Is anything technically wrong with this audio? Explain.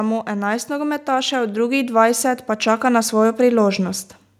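Yes. From 0.26 s to 4.06 s, automatic gain rising lifts the level by about 9 dB. The gain control judged the input too quiet, so speech and background swell together.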